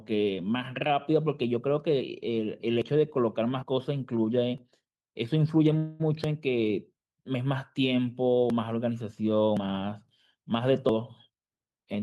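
At 2.82 and 3.63 s the speech jumps ahead, likely a dropped buffer (overrun): samples got overwritten before being read, so roughly 40 ms vanishes each time and the edges butt together. From 5.77 to 6.02 s a call audio freeze sets in, likely from delayed packets draining the jitter buffer. The last sound is stretched into a fading buzz or hiss for about 220 ms, then the speech carries on where it stopped, nothing lost, just later. The same skips return at 6.24 and 8.50 s, around 40 ms each, then bigger jumps at 9.57 s, roughly 150 ms gone, and 10.89 s, about 100 ms. From 11.29 s to the end there's a jitter buffer speed-up, likely trimming a backlog. Short pitch-period slices get cut repeatedly, roughly 150 ms in total, so the speech runs at about 118% speed with its pitch unchanged and sounds rushed.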